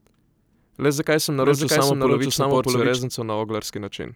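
From about 1.42 s to 3.00 s, the speech is likely being captured a second time by a slower path, or an edit is holding two copies out of step. That produces a doubled audio track. A second, full-band copy of the speech runs roughly 0.7 s behind the first, at much the same loudness. It has no decay or room colour, so it sounds like two identical talkers overlapping rather than an echo. It cuts in and drops out abruptly at both ends.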